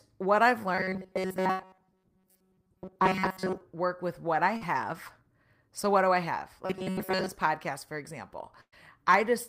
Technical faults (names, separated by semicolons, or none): robotic sound from repeated short buffers; burst of packet loss; short concealed packet loss